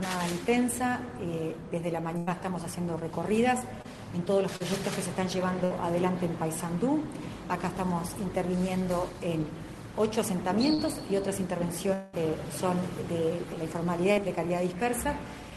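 At 2.17 to 2.36 s a burst of packet loss cuts about 100 ms of audio out of the stream. The receiver bridges the hole by extending the last sound it had for roughly 94 ms, turning it down as it goes, so a fading buzz or hiss stands in for the lost material before playback picks up further along with that stretch gone.

Short concealed packet loss follows at 3.82 to 3.86 s, where about 20 ms failed to reach the decoder in time, and again at 4.56 to 4.62 s, with about 40 ms missing. Each hole is patched by continuing the preceding sound and crossfading back into the real signal. At these lengths the repair is heard only as a quick smear or wobble.

A second burst of packet loss at 5.64 to 5.72 s removes about 60 ms. A concealment tail of around 61 ms fades in its place before the audio jumps ahead.

Two more short concealed losses, each about 40 ms, occur at 10.74 to 10.80 s and 14.12 to 14.18 s. 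Both produce the same brief smearing.

Between them, at 11.94 to 12.24 s, a long network dropout is the likely cause of a 200 ms gap in delivery. The receiver fills about 190 ms of it with a decaying continuation of the last sound, which never falls all the way to silence. The audio then resumes later in the stream, and the missing 200 ms is skipped.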